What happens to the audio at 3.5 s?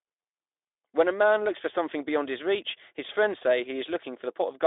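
Nothing goes wrong at 3.5 s: the speech carries on intact through that moment, with no dropout, glitch or other fault.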